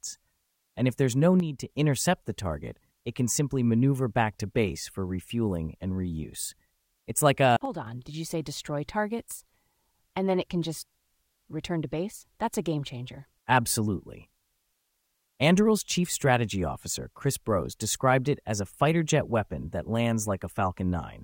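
One channel drops out from 1.40 to 1.70 s and again from 7.65 to 7.87 s in this speech clip. Each time the level falls abruptly by about 6 dB for roughly a third and a fifth of a second, then snaps back. That drop likely comes from one side of a stereo feed briefly going silent before the mono fold-down, so material common to both sides loses half its contribution and anything present only on the lost side vanishes.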